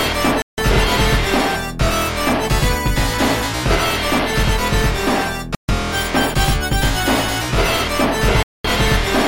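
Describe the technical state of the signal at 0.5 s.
At 0.5 s the signal is in a dropout: from 0.42 to 0.58 s the sound cuts to 160 ms of silence, then resumes. This is likely a Bluetooth stall, where radio interference delays packets until the headphone buffer empties and playback waits for retransmissions. On a waveform it shows as a flat near-silent gap with abrupt edges; on a spectrogram, a clean vertical blank band across all frequencies.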